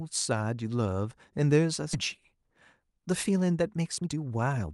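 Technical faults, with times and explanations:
1.93 to 1.95 s, skip ahead: roughly a second of speech vanishes with no fill, the two sides spliced directly, unlike a dropout, which leaves silence or concealment noise.
2.36 to 4.67 s, jitter buffer speed-up: excess buffered audio is trimmed in pitch-period slices, so speech runs about 13% faster at unchanged pitch, hurried rather than chipmunk-like.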